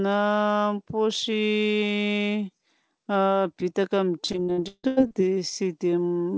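From 4.26 to 5.13 s the speech breaks up with repeated packet loss, giving a robotic sound. Seven holes fall in under a second. Each one is patched by stretching the last bit of sound, and the next hole comes soon after. About 425 ms of that span is filled in this way, and roughly half is concealment. The longest hole lasts 158 ms. The result is choppy speech with pieces missing. Above 8 kHz there is nothing at all, which fits a G.722 call path.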